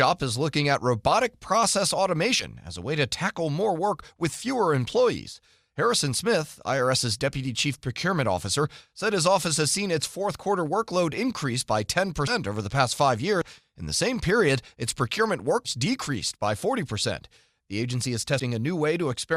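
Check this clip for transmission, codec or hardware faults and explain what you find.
The speech has one fault type: compressed frames skipped, heard five times. Each time whole frames never play, so the audio jumps ahead. The gaps fit 20 ms frames. At 2.39–2.45 s, after "looking at robotic process", roughly 70 ms goes missing. At 12.27–12.32 s, after "quarter workload increase by", about 100 ms is lost. At 13.41–13.46 s, after "past five", roughly 70 ms drops out. At 15.65–15.70 s about 200 ms vanishes, and at 18.39 s about 100 ms.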